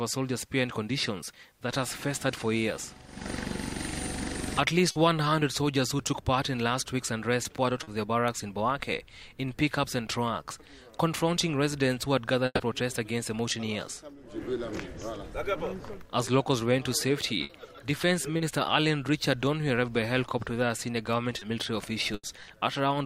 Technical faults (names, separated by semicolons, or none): short concealed packet loss; burst of packet loss